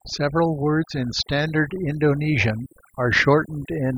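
From start to finish the speech carries overdone noise removal: a noise reducer set far too strong cuts individual frequency bands whenever they sit near its noise estimate. The background falls to near silence with twinkling specks. A spectrogram shows scattered isolated dots and a gappy, ragged voice.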